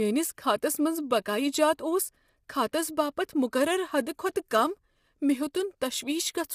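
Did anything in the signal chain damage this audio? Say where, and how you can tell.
Yes, at the codec stage, throughout: the speech sounds rough and grainy, with noise filling the gaps between harmonics and nothing above 15.7 kHz. This is likely low-delay AAC compression, whose short frames blur pitch harmonics. Plain band-limiting would stay clean, and this graininess points to a low bitrate, around 32 kbps.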